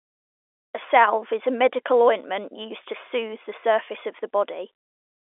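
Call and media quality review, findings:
No findings for this call; the speech carries ordinary G.711 telephone coding, with the usual 300 Hz to 3.5 kHz line band and nothing above 3.8 kHz.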